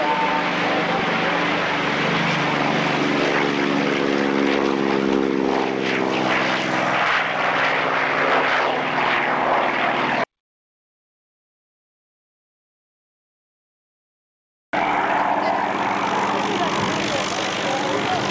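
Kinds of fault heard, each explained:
Audio dropout to silence: sound cuts to silence from 10.24 to 14.73 s, likely a lost input; no room tone remains, unlike gating.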